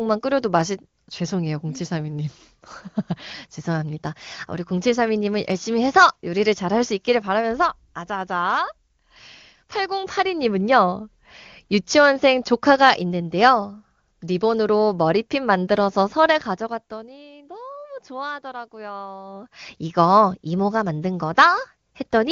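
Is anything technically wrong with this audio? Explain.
No, nothing in this speech recording points to a technical fault.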